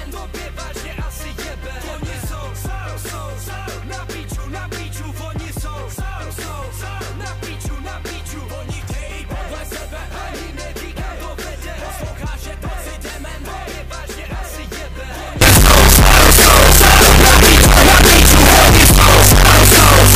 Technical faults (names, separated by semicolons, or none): signed and unsigned mixed up